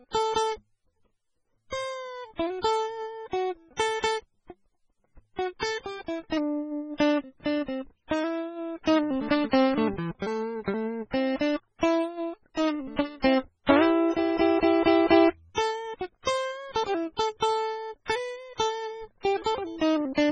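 From start to finish the music carries heavy artefacts that point to MP3 compression at a very low bitrate, likely around 16 kbps. Nothing is present above about 9.9 kHz, so the top end sounds dull and closed in. With so few bits, weak frequency components drop in and out between frames, producing a watery, swirling texture, metallic chirping on bright sounds, and transients that smear rather than strike cleanly.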